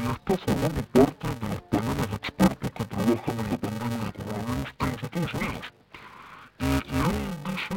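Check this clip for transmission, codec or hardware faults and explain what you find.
One fault runs throughout: interleaved audio read as planar, with 2.9 ms blocks, which fits 128-sample blocks. Each block's alternating stereo samples are split into halves, giving dull, robotic sound buzzing at 345 Hz, the block rate. A spectrogram shows a comb of lines at 345 Hz multiples, and the waveform shows jumps every 2.9 ms.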